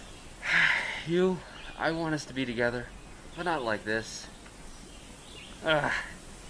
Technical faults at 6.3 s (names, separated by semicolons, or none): none